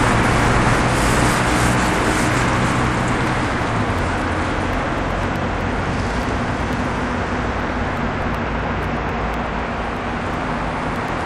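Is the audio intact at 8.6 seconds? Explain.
No. From 0.13 s to 11.21 s, including 8.6 s, periodic USB or driver dropouts occur: every 0.124 s the bus or driver stalls and about half a millisecond of audio is skipped, leaving evenly spaced ticks heard only while sound is present.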